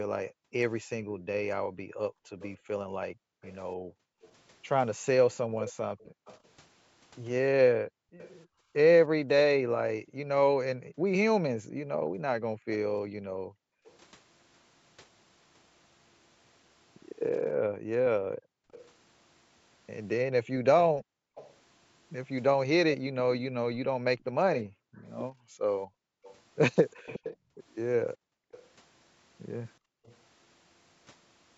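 From 0.28 to 13.86 s the room background is pumped down by background gated by the echo canceller. It is not a dropout of the whole signal: only the ambience sinks, by as much as about 40 dB, for around five seconds in total.

From 1.19 to 8.3 s a delayed copy trails the speech by 304 ms, roughly 15 dB down. This is likely an echo leak from the far end's loudspeaker, and the discrete 304 ms repeat sets it apart from room reverb.

A brief scrap of what is likely echo leak sits at 13.86 to 13.96 s, delayed 331 ms and far quieter, around 30 dB below the speech.

The gating returns from 17.57 to 30.05 s, again dipping the ambience by up to about 40 dB, around three seconds in all.

From 18.71 to 30.16 s the delayed copy comes back at 362 ms, roughly 15 dB under the speech, again most likely leaked loudspeaker echo.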